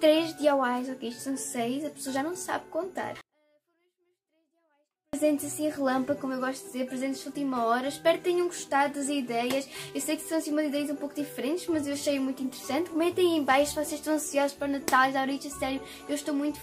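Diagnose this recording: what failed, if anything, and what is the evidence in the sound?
A 24-bit alignment error (too quiet) at the sample-format conversion stage: from 3.21 to 5.13 s the sound falls abruptly by about 48 dB and returns just as abruptly. Low-word 24-bit samples were read as 32-bit integers. Unlike a dropout or fader move, the faint sound stays clean and undistorted.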